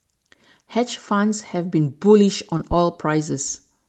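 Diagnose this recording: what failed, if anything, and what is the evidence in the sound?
Two things went wrong here, both close together in the back half of the clip.

Short concealed packet loss at the network stage, around 2.57 to 2.61 s. You get a brief smear right there. About 20 ms of audio never got to the decoder in time, which fits one lost Opus frame on the call path. The receiver patched roughly 13 ms of it by stretching the last bit of sound, pitch-based if voiced and shaped noise if not, then crossfaded back into the real signal.

Then a phantom power thump in the analogue wiring, from about 2.72 to 2.77 s. It's a low, deep bump that dies away fast, over about 12 ms. Someone switched the mic supply on or off with the input live, and that voltage step went straight through the coupling capacitors as a low-frequency pulse. Because it's upstream of the codec, the call path, which you can hear topping out around 12 kHz, just carried it along.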